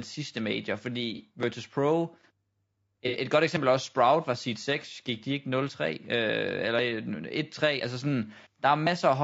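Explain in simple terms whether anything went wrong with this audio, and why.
A couple of things went wrong here. Throughout the speech there's a rough, grainy quality, with a hiss sitting in the gaps between the voice's tones and a top end that sounds thin and a bit artificial. That's likely low-delay AAC compression, the kind used on video calls. It cuts the sound into very short chunks to keep lag down, and with too few bits to go round it can't capture the voice cleanly, so the detail gets turned into noise.

On top of that there are two brief glitches from AAC frame loss with concealment. At about 1.16 to 1.21 s there's a short smeared, noisy patch lasting about 30 ms. At about 3.08 to 3.17 s a similar one lasts about 60 ms. In both spots a chunk of audio never arrived, so the decoder patched the hole by reusing and scrambling the last good sound, which leaves a blurry, phasey smudge instead of clean speech.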